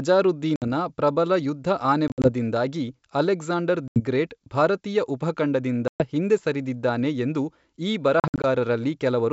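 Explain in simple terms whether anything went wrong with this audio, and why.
Something went wrong five times: packet loss on an ADPCM call. Small chunks of the call never arrived and were replaced by silence. You hear sudden holes at 0.56, 2.08 to 2.30, 3.88, 5.88 and 8.20 to 8.45 seconds, each lasting a tenth of a second or so. The second and last are broken into scattered gaps. After each hole the decoder has lost track of the sender, so the speech comes back slightly distorted, like just after the hole at 3.88 seconds, on "ಗ್ರೇಟ್ ಭಾರತೀಯ ಉಪಖಂಡದಿಂದ ಹಿಂದೆ".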